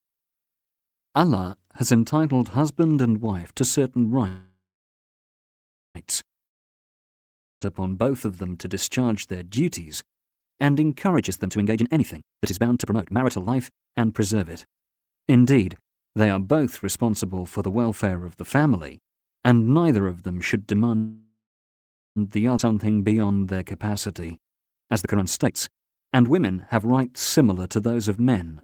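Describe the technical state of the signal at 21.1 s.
After "neither of them should", a fading buzz and then silence fill 20.96 to 22.18 s. This call audio freeze is likely from late packets emptying the jitter buffer.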